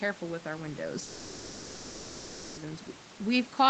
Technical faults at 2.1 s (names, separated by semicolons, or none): long network dropout